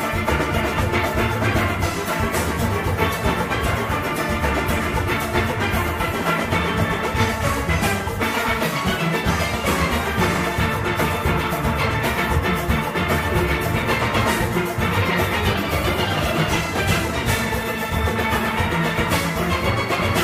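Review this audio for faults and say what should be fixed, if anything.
Nothing here needs fixing; no faults are audible anywhere in the recording.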